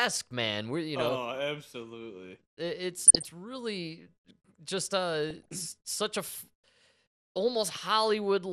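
Speech throughout sounds dull and plainly gurgly, with the top end thinned and a granular roughness, which points to MP2 compression as the likely cause, at a rate around 80 kbps where the encoder has shut off its upper sub-bands. Because this dullness is steady, it is distinct from the DAB burbling, which comes in short bursts at 1.01 to 1.11 s, 2.96 to 3.27 s just before "really just", and 5.30 to 5.52 s between "really just" and "such a". In those bursts, short blips of noise land in single sub-bands, as happens when roughly half a percent of the bits arrive corrupted and slip past error correction under weak reception.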